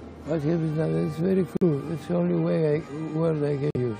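Corrupt frame muted at 1.57–1.63 s and 3.71–3.76 s: the decoder rejected damaged compressed frames and substituted abrupt silence, each gap a few frame lengths long, with timing intact rather than shifted.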